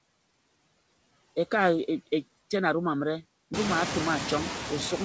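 Noise suppressor artifacts run through the whole clip. Frame by frame, the suppressor picks out the frequency bands it judges to be steady noise and pulls them down by about 20 dB. The background therefore drops away in the pauses and swells back up beneath the speech. Around 3.5 s the room noise climbs by about 21 dB and sits only about 5 dB below the speech. Nothing is heard above 8 kHz, which fits a wideband call codec such as G.722.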